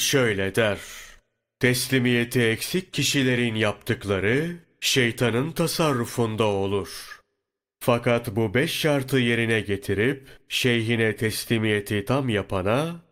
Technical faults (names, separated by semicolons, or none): none